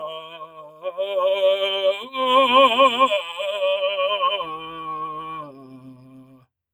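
A piece of music with a speech-style noise suppressor left running throughout, treating sustained tones and tails as noise and turning them down, so the level pumps with gain swings of roughly 15 dB. On a waveform the envelope breathes unevenly; a spectrogram shows held partials fading in and out while attacks stay bright. The worst sound cut by the noise suppressor comes from 0.0 to 0.99 s, dropping about 14 dB, then from 5.46 to 5.8 s (about 6 dB) and 5.96 to 6.47 s (about 11 dB), where sustained energy visibly thins and decays stop short.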